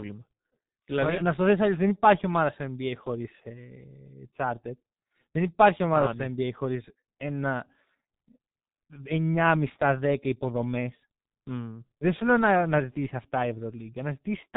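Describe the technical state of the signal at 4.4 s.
At 4.4 s the speech carries heavy G.723.1 codec damage, present throughout the clip. Its 30 ms frames and coarse, slowly updated voice model leave the sound muffled and hoarse, with smeared consonants, consistent with roughly 6 kbit/s coding. A spectrogram shows a hard ceiling near 3.8 kHz.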